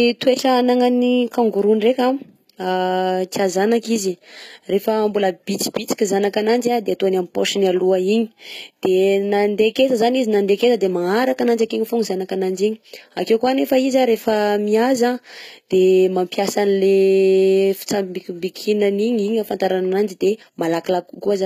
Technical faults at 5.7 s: HE-AAC compression

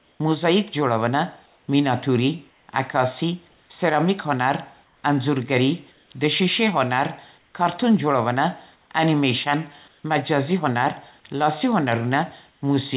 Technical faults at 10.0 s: comfort noise in place of the background

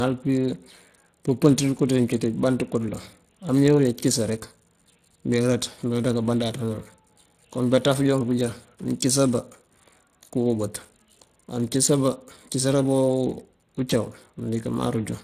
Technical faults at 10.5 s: Speex codec

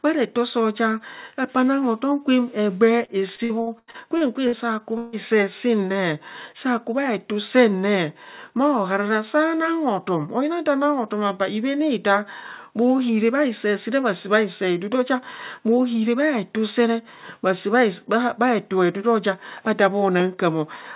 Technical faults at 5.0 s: long network dropout

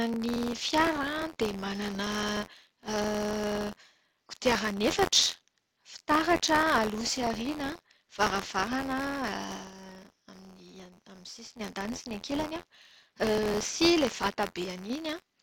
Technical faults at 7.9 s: buffer tearing

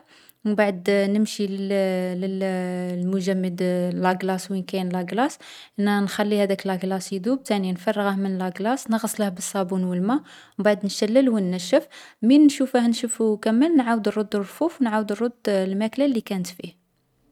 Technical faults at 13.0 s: none

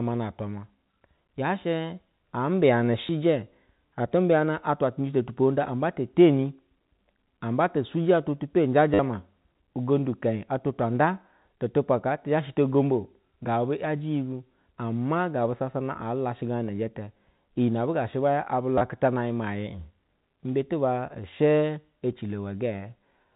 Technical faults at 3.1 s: packet loss with last packet repeated

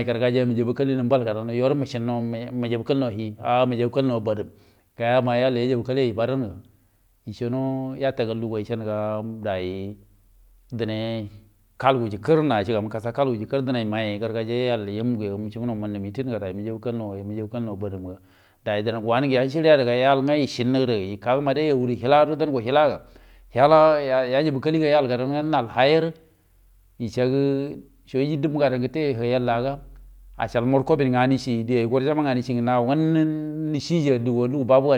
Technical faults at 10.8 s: none

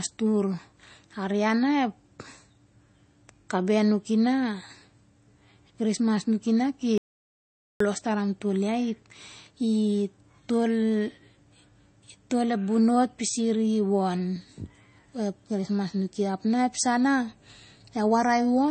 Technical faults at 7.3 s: MP3 compression; audio dropout to silence

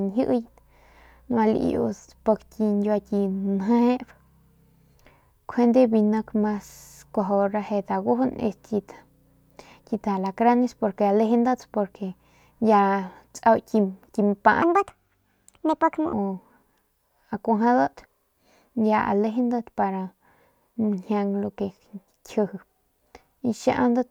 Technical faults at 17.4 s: none

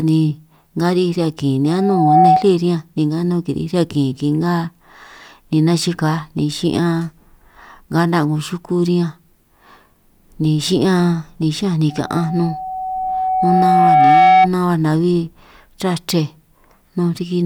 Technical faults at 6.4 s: none

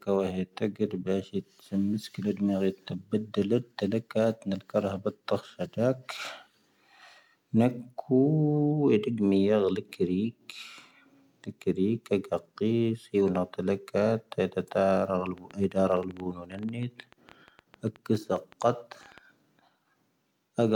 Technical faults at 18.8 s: train of clicks

